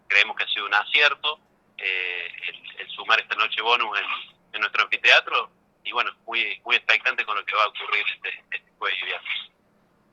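Listening through the clip, nothing stood out as a fault at any point.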